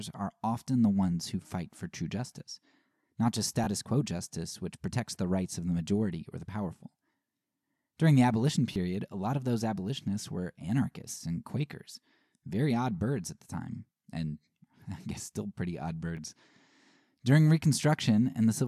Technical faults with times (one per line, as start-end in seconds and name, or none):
3.64-3.67 Bluetooth stutter
8.73-8.76 Bluetooth stutter
16.17 Bluetooth stutter